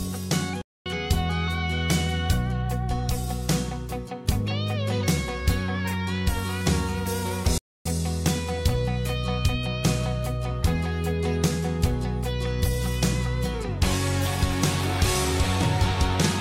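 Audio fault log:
0.61–0.86 s and 7.58–7.86 s, playback stall: the sound cuts to silence mid-flow for about 0.24 s the first time and 0.27 s the second, then picks up again. Each gap is a hard dropout rather than a fade, long enough to register as a hitch in the audio's continuity. The likely cause is the player briefly running short of data or having its output thread held up, so nothing reached the output until it caught up and resumed.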